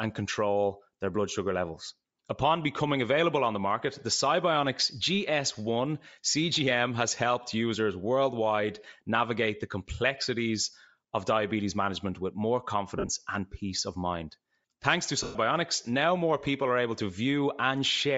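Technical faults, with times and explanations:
throughout, Bluetooth LC3 compression: the speech carries a plainly audible breathy, grainy edge in the upper band, where real detail has been swapped for filled-in noise. The likely cause is LC3 at a low rate, fitting roughly 32 kbps with 10 ms frames. Unlike frame loss, it never lets up.
12.97–13.09 s and 15.23–15.35 s, lost LE Audio frames: the first is 80 ms of gaps scattered over 120 ms, the longest about 50 ms, and the second is a solid 120 ms. The decoder reuses the last spectrum with scrambled signs, so speech smears into a noisy wash instead of clicking, fading away after the first few frames.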